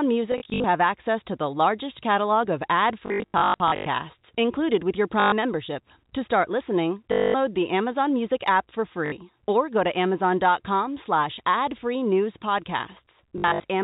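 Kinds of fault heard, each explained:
Packet loss with last packet repeated: Lost packets were filled by replaying the previous one. This gives a short robotic stutter. Six bursts occur, the worst from 3.06 to 3.86 s. The buzz sits at 50 Hz, fitting 20 ms packets.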